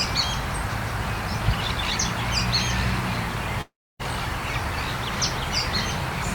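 At 3.61 s the sound breaks into a buzzy, fading continuation of its last moment, then falls to silence for about 270 ms before resuming at 4.01 s with roughly 380 ms of material simply gone. This is a long network dropout, likely a stall in the incoming stream. The receiver smeared the last sound to cover the gap. That fading tail followed by dead air sets it apart from a clean mute or a brief packet-loss click.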